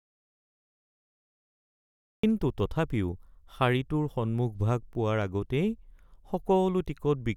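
Speech clip, and it opens in an audio dropout to silence: from the very start until about 2.24 s there's nothing but silence, not even room tone, before the speech cuts in mid-flow. That likely means the input was lost or muted while recording carried on.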